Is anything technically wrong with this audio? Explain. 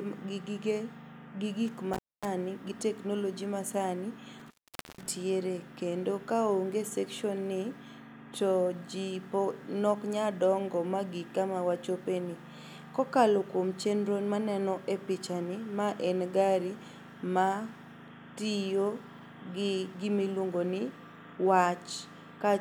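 Yes. An intermittent contact, a loose cable or plug connection briefly opening, twice interrupts the speech signal path: from 1.94 to 2.28 s, with the line open for about 0.24 s just before "gi technology masani", and from 4.39 to 5.09 s, open for about 0.48 s right after that phrase. Each time the sound drops out abruptly, with crackle at the break and return edges.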